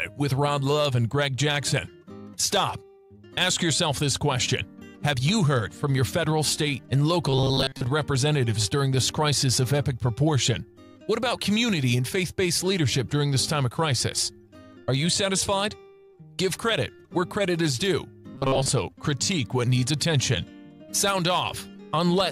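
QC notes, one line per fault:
7.30–7.84 s and 18.35–18.70 s: robotic sound from repeated short buffers. A rigid, metallic buzz at 134 Hz replaces most of the audio. The likely cause is delayed input that was covered by looping a buffer of roughly 7.5 ms, skipping the real audio.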